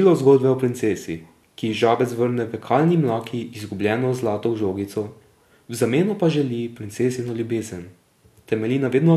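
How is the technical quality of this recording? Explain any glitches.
No glitches can be heard anywhere in the recording. The speech continues without any break, jump or disturbance in the signal.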